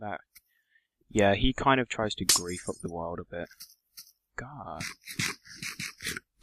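At 1.44 s a phantom power thump hits and is over by about 1.51 s. A supply switched on a live input sends a DC step through the coupling capacitors, which the capacitors turn into a single low, dull thud peaking near -16 dBFS and dying away within roughly 15 ms. Unlike a handling bump or plosive, it is one clean step with no rustle, no repeated knocks, and no link to the surrounding sound.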